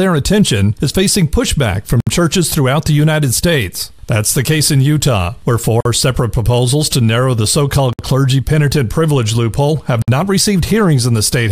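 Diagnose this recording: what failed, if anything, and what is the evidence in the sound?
Gaps at a join of encoded pieces, from the codec stage: silences open at 2.00 s (65.5 ms), 5.81 s (48 ms), 7.93 s (60 ms) and 10.02 s (57 ms), each with smeared edges. Separately encoded pieces kept their start delay and end padding. Unlike a network dropout, the sound resumes exactly where it stopped, with nothing lost.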